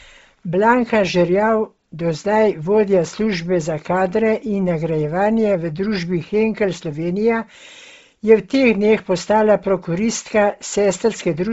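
From start to finish the speech has a breathy, grainy edge and nothing above about 7.8 kHz. That's likely Bluetooth LC3 compression, with the upper band zeroed and noise-filled. The heavy damage fits a low bitrate around 24 kbps with short 7.5 ms frames.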